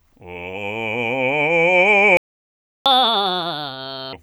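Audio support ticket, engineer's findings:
Playback stall, 2.17 to 2.86 s. Music cuts to silence for about 690 ms, then resumes. Likely player buffer underrun or blocked audio thread.

Catch-up at higher speed, 2.86 to 4.13 s. Music runs 1.5x fast, pitch up roughly seven semitones. Resampler draining backlog, then normal rate.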